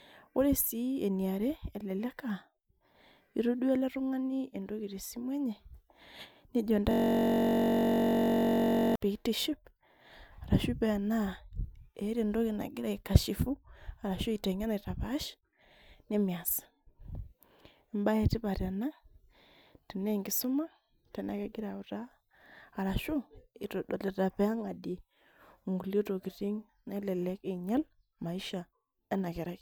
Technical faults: system hang loop

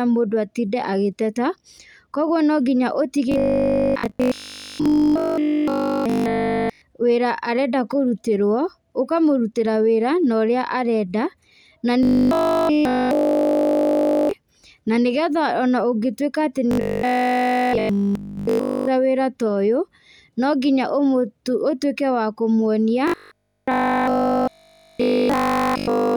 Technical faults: robotic sound from repeated short buffers

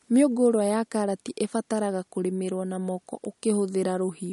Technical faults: MP3 compression

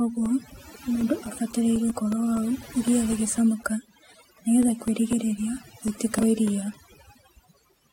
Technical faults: overdone noise removal; periodic USB or driver dropouts; damaged data in a compressed stream

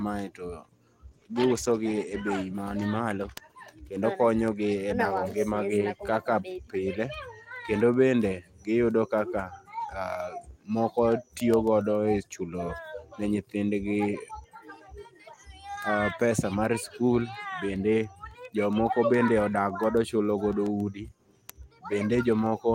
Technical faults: call bitrate drop

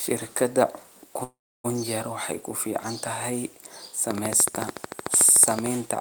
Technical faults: call audio freeze; train of clicks

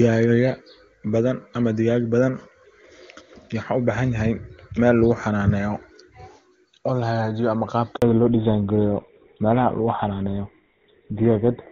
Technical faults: handover gap; fallback to narrowband

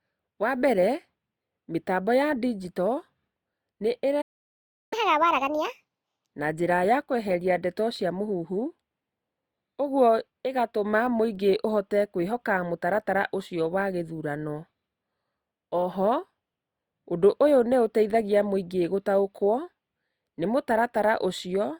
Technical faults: playback stall; catch-up at higher speed

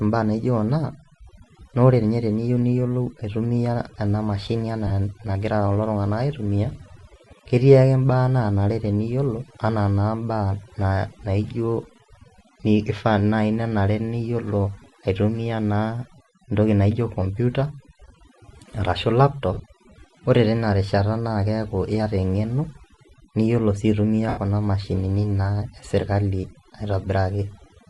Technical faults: overdone noise removal; Bluetooth LC3 compression; lost LE Audio frames

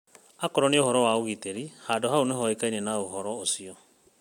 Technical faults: none

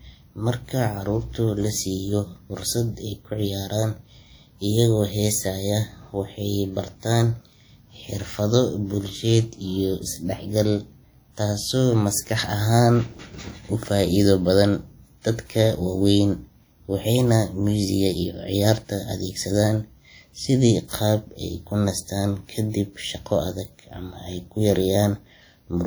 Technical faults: WMA compression; pre-echo

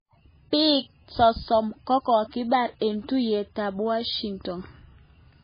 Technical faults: MP3 compression

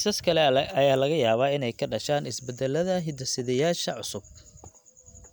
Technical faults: none

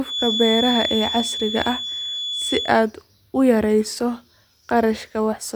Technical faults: feedback whistle

